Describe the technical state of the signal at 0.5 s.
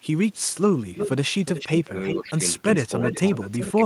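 At 0.5 s a faint, delayed copy of the speech trails behind the voice, sitting very far below it, with a lag of about 393 ms. This echo leak runs from 0.31 to 0.54 s. The likely cause is a far end playing the call over a loudspeaker, where the echo canceller failed to fully remove what its microphone picked up, so a residue of the speech was returned down the line.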